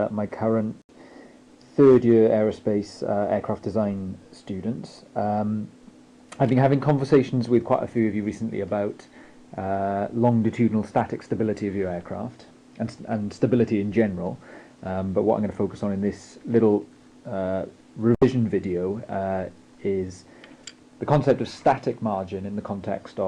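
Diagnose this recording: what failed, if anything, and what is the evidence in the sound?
The digital broadcast reception failed: the receiver lost the signal or rejected corrupted frames and muted its output until clean frames arrived. The sound drops abruptly to silence from 0.82 to 0.90 s and again from 18.15 to 18.22 s, each gap about 78 ms long. The programme resumes further along rather than where it stopped. Each hole is consistent with about three lost frames, and the material sent during those moments never reaches the listener.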